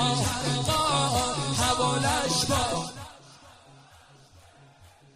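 From 2.73 to 3.20 s, zipper noise: the level drops about 25 dB in unsmoothed 2 dB steps, about twenty a second, ticking audibly, visible as a staircase envelope with faint vertical click lines.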